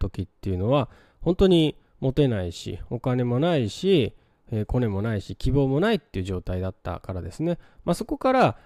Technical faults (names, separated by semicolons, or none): none